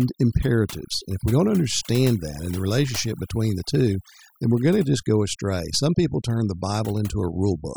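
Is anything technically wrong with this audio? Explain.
Yes. Throughout the speech, there is overdone noise removal. A noise reduction stage was pushed too hard on a noisy recording, so any frequency band sitting close to its estimate of the background noise gets cut deeply or switched off entirely, and the softer parts of the voice are treated as noise and removed along with it. The result is a background of near silence dotted with twinkling, chirpy specks.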